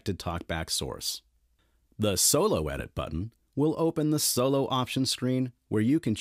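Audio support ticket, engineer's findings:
Loud pop, a double one, 2.80 to 3.01 s, a few dB over the program, with the sound continuing underneath. Likely a voltage step from a plug or switch hitting the line.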